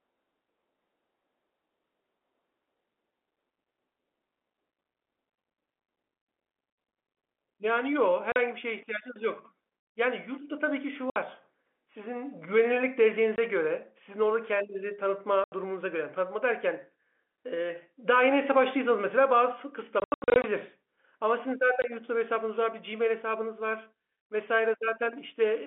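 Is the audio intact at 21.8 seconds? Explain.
No. At 21.82 to 21.84 s there is packet loss filled with silence: a single 20 ms packet went missing and the receiver inserted silence in its place. The resulting gap in the speech has abrupt edges, while the G.711 telephone band continues on either side.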